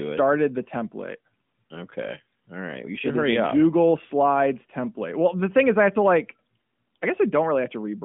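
No technical faults can be heard in this speech, which comes over a narrowband mobile line with nothing above 3.7 kHz.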